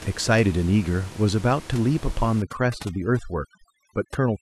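A short speech clip with room noise sitting about 19 dB below the voice, until overdone noise removal kicks in from 2.42 s to the end at 4.41 s. The denoiser's pushing too hard, so bands near its noise estimate get gutted, leaving twinkly specks in near-silence.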